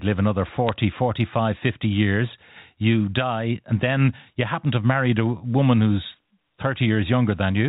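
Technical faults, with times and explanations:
0.69–0.76 s, bit errors on a digital phone line: after "live another", flipped bits corrupt single G.711 samples, giving sharp ticks seen as isolated waveform spikes and thin vertical spectrogram lines.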